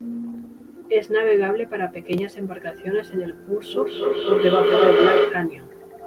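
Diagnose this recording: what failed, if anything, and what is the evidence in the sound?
Feedback howl from 3.68 s to 5.62 s, at the call stage. A tone near 400 Hz swells out of the speech and peaks about 3 dB above it, with a loop delay of roughly a fifth of a second. Two devices in the same room are joined on one call, so sound leaves one loudspeaker, enters the other microphone and returns with more level on each pass. The repeats narrow to the frequency the loop favours and run until 5.62 s, when the loop is broken.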